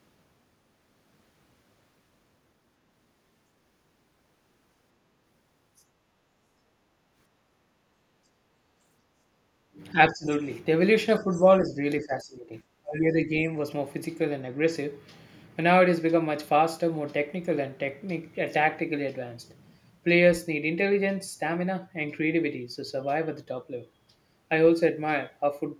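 It's a speech recording with two echo-canceller problems. There's the other side's voice leaking through, a faint scrap at 5.77–5.82 s, roughly 40 dB down, and a clearer one at 11.31–11.41 s, around 25 dB under the talker. That's likely far-end loudspeaker sound the canceller didn't fully remove from the mic. You also get speech suppressed in double talk at 9.92–10.29 s, 11.19–11.78 s, 12.0–12.54 s and 12.81–13.29 s. The talker's level dips by somewhere between 10 and 30 dB, with the deepest dip in the last one. That's likely the canceller failing to separate the talker from the echo while both sides were speaking, so it ducks everything.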